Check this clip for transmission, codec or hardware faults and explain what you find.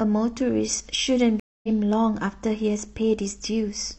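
There's one clear fault: a stream reconnect between about 1.40 and 1.69 s. The link dropped, so the player went quiet for about 236 ms, then reconnected and started a fresh decoder partway through the stream. When the speech picks back up, it has jumped ahead by roughly a third of a second, so a bit of it is simply gone. You hear a dead gap followed by a restart, with the first frame or so softened as the new decoder gets going.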